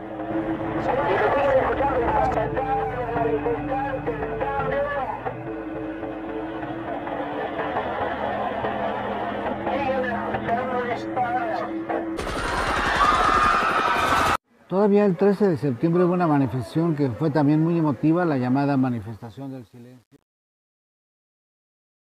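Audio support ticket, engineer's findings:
Truncation distortion on a fade, 18.87–22.14 s. Fade-out tail turns gritty; worst from 19.39 s to the end. Probable component: undithered gain or fade stage. Mechanism: low-level samples rounded to too few steps, consistent with a 9-bit path, so the decaying waveform becomes coarse square steps.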